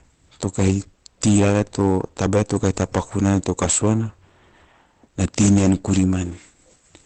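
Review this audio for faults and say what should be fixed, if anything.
Hard clipping is present throughout the clip. The speech is driven about 16 dB past the level the chain can pass, so a few percent of samples are cut flat at the ceiling. Those squared-off peaks add high harmonics, which are heard as a harsh fuzz on every loud syllable. To prevent it, set the gain so peaks stay below full scale, with headroom at every stage.

Opus compression damage is also plainly audible throughout. The sound is muffled and hoarse, with nothing above 8.4 kHz. This points to a speech-mode encoder at a low bitrate, around 16 kbps, likely Opus in its SILK mode. Spending so few bits leaves a narrow, rough, band-limited result. To prevent it, encode at a higher bitrate so the encoder keeps full bandwidth.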